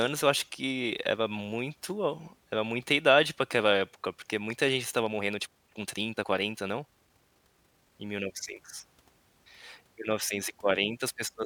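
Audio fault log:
5.00–8.06 s, time-stretched section: right after "época porque muita gente" the speech abruptly runs about 1.44 times faster while its pitch stays put, so it sounds rushed. This is likely a time-stretch that squeezed the passage to fit a shorter slot, cutting out short pieces to keep pitch steady. On a spectrogram the harmonics hold their spacing but syllables are compressed in time, with small seams where segments were joined; the waveform shows tighter, crowded bursts.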